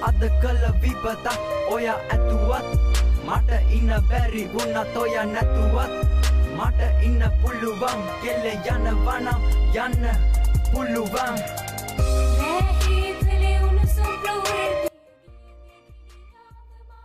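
Audio dropout to a faint residue from 14.88 s to the end: the sound cuts out abruptly rather than fading, leaving only a faint leak roughly 25 dB below normal level, likely because the signal path broke while the downstream chain stayed live.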